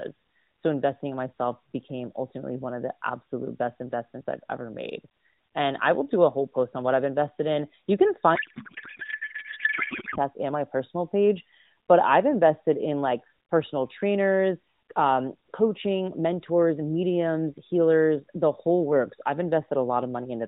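Right after "invested in you can", at 8.36 s, the speech collapses into a garbled, warbling noise that barely follows it, and this runs until 10.18 s, when "and my personal page" comes through intact. That's a codec payload misread. The AMR narrowband stream, telephone-band and sounding like its 12.2 kbps mode, was packed octet-aligned but unpacked as bandwidth-efficient. So the decoder pulled every field from the wrong bits and rebuilt nonsense.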